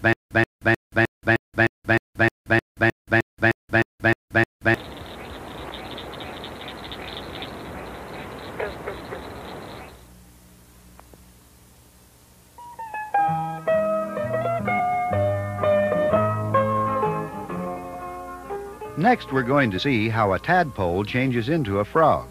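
From the very start until 4.74 s, a 130 ms burst repeats every 308 ms, with about 178 ms of dead silence between repeats. This stutter with silent gaps, 15 repeats in all, is likely a stalled stream replaying its last fragment at each retry.

Skips at 14.79, 16.16, 18.55 and 19.78 s jump the audio ahead by roughly 50, 70, 150 and 70 ms. These are compressed frames skipped, whole frames lost or rejected by the decoder.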